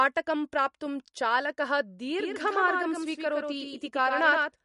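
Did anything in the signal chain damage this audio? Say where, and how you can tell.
Yes. Codec stage: the audio is plainly watery, with nothing above 11.2 kHz, likely from MP3 encoding at a low bitrate, around 48 kbps, zeroing weak frequency lines.

From 2.2 s, just after "प्राप्तुं चालकः", to the end, a full-band copy trails by around 100 ms at about 5 dB lower. This doubled audio track suggests a second, slower capture path or an edit holding two offset copies.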